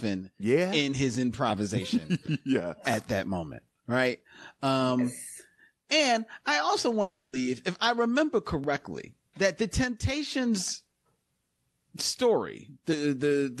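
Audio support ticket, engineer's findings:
Gap at 7.01 to 7.35 s in the speech. Last sound smeared into a fading buzz for about 320 ms, then roughly 20 ms of dead air before audio resumes, with that third of a second gone for good. Likely a long network dropout: packets stopped arriving and the receiver's loss concealment stretched the last frame until it gave up. Call codec path audible as top end stopping near 12 kHz.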